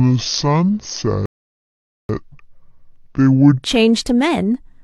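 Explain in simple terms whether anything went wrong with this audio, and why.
Section at the wrong speed, from 0.00 to 3.64 s: for the first three and a half seconds the speech plays at only 0.578 times its proper speed, so it sounds slow and dragged out, and pitch drops with it by nearly an octave, making the voice unnaturally deep. The likely cause is that this stretch was played back against the wrong clock, so speed and pitch shifted together. After 3.64 s the speech returns to its normal rate and pitch.

Rebuffering stall, from 1.26 to 2.09 s: in the middle of that slowed section the sound suddenly drops to silence for about 0.83 s, then picks up exactly where it left off. This happens when the player runs out of downloaded audio and has to wait for more to arrive. Nothing is skipped or lost; the pause simply adds dead time to the clip.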